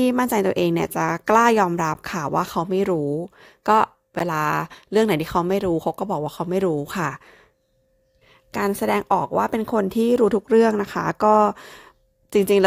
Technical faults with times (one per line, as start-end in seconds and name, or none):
1.94 block of digital silence
4.19 block of digital silence